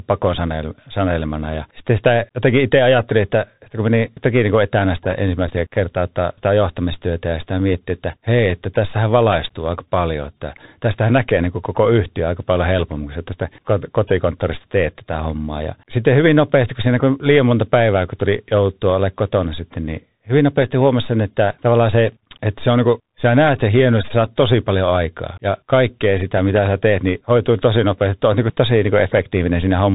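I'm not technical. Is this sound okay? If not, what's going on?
No. From start to finish the speech runs through a Bluetooth CVSD headset codec, so nothing above about 3.8 kHz survives. Unlike a plain muffling filter, it leaves a grainy hiss underneath, makes s sounds scratchy, and roughens loud bright moments.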